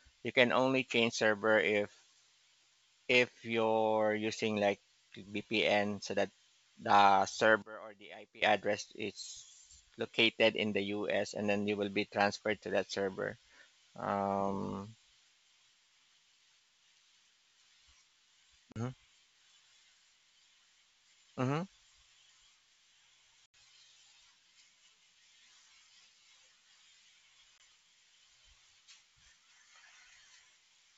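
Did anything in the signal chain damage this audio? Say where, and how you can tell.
Yes. From 7.62 to 8.42 s, right after "so that the", the speech drops by about 21 dB and turns faint. That is the sound of one channel inverted, probably from a polarity flip in the wiring or mix before a mono fold-down. The common centre content cancels, leaving only the small difference between channels. On a spectrogram the band goes pale. On the waveform the amplitude collapses for that stretch.

The second problem is packet loss on an ADPCM call, at the network stage. There are hard-edged gaps of 40 ms at 18.72 s, 80 ms at 23.46 to 23.54 s, and 20 ms at 27.58 s. Their lengths point to losing one to a few packets each time. On the waveform these show as flat, near-silent runs with abrupt edges. After each gap the decoder's predictor and step size no longer match the sender's, so the speech comes back slightly distorted before it settles.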